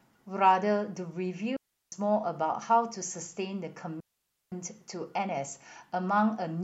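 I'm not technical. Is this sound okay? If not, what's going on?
No. The speech cuts out twice, from 1.57 to 1.92 s and from 4.00 to 4.52 s. This is a digital wireless dropout. The wireless link lost too much data, so the receiver muted itself. Each gap is clean, near-silent, with no crackle around it.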